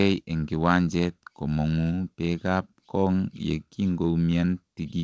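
No technical faults are audible anywhere in this recording.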